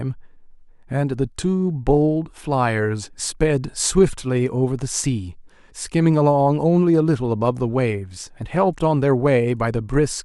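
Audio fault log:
0.13–10.22 s, clock slip clicks: two devices likely run on unsynchronised clocks a few hundred parts per million apart, so a single sample is dropped or repeated roughly every 50 ms. Some two hundred faint, evenly spaced ticks form a soft rattle under the speech.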